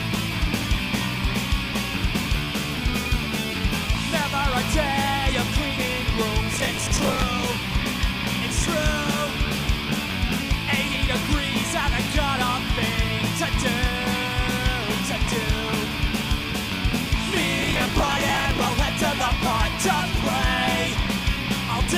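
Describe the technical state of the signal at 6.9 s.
At 6.9 s the signal is in the middle of a processor overload crackle, running from 6.54 to 7.22 s. The processor falls behind and misses its deadlines for dozens of short buffers in a row. Each buffer lasts about 10 ms. When one is late, a scrap of stale audio plays in its place with hard edges. Those repeated splices form a gritty, tearing crackle laid over the sound. It stops once the load clears.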